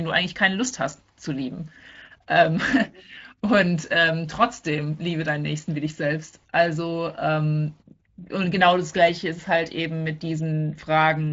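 No technical faults can be heard in this recording.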